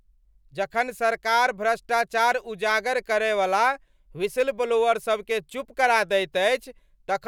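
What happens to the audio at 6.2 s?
Nothing goes wrong at 6.2 s: the audio carries straight through that moment with no dropout, click, distortion or other audible fault.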